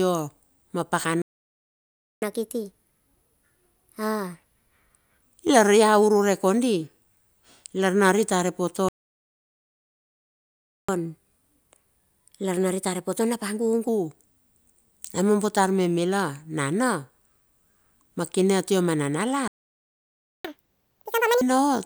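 At 1.22 s the speech cuts out in a playback stall lasting about 1.0 s, to 2.22 s. The output drops to silence mid-flow, most likely because the player's buffer ran dry or its audio thread was blocked. From 2.22 s to 5.22 s there is catch-up at higher speed. The backlog is resampled at 1.25x, so speech runs quicker and sits roughly four semitones sharp.

A second stall follows from 8.89 s to 10.89 s, a full 2.0 s gap with the same likely cause of starved or blocked playback. Catch-up from 10.89 s to 13.89 s is gentler at 1.1x. The pitch rise is only about a semitone and a half, heard as a slight hurry and brightening.

The third stall runs from 19.48 s to 20.45 s, about 0.97 s of silence, again likely a buffer underrun or thread stall. Its catch-up, from 20.45 s to 21.41 s, is the most severe. Playback doubles to 2.0x and the pitch jumps by nearly an octave, giving a brief, obviously chipmunk-like burst.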